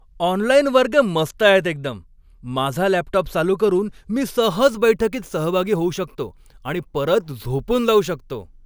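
Speech clip, fine until about 4.42 s, just after "लॅपटॉप चालू करून मी", when crude rate conversion kicks in and stays to the end at 8.66 s. Samples seem to be repeated rather than filtered, which fits a 3:2 step such as 32 kHz up to 48 kHz. That repeating pattern sprays inharmonic tones about 25 dB below the speech, so you get a gritty fizz riding on the louder and brighter sounds.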